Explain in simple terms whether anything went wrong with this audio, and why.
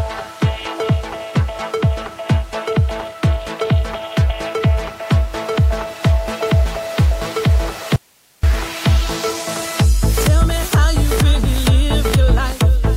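At 7.96 seconds the sound suddenly cuts out. It comes back at 8.43 seconds, almost half a second later. This is an audio dropout to a faint residue. During the gap you hear only a soft hiss, far quieter than the sound itself. The switch is abrupt in both directions, not a gentle fade or a natural pause. The likely cause is that the wanted signal was lost for a moment while the recording chain after the break kept running, so it picked up only its own background hiss.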